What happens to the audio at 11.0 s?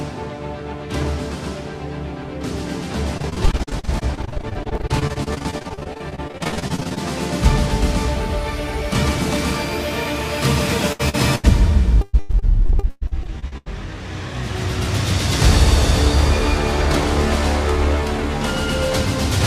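From 10.92 to 11.01 s, a burst of packet loss: the receiver stretched and faded the last sound, then skipped about 60 ms. A spectrogram shows a frozen, dimming band before an abrupt restart.

Then at 11.09 to 11.15 s comes a short concealed packet loss: roughly 40 ms was synthesised from preceding sound and blended back, heard as a brief smear, and visible as a blurred patch in the spectrogram.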